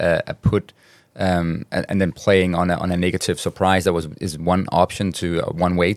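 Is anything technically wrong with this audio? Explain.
No, nothing in this speech recording points to a technical fault.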